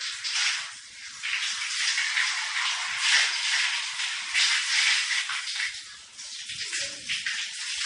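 Throughout, plainly audible watery, swirling MP3 compression, likely at a low bitrate around 48 kbps, strips content above 10.8 kHz, leaving a flat ceiling and flickering gaps on a spectrogram. From 2.20 to 5.22 s, a doubled audio track, likely a second copy out of step, repeats everything roughly 0.4 s late and about 5 dB quieter, appearing as an abruptly starting, offset echo of the waveform.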